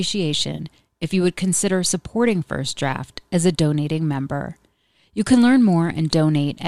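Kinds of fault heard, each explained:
AAC frame loss with concealment: At 0.57 to 0.60 s, just before "if you would consider", about 20 ms of audio is missing. The decoder fills it from the previous spectrum, leaving a brief smeared, noisy patch.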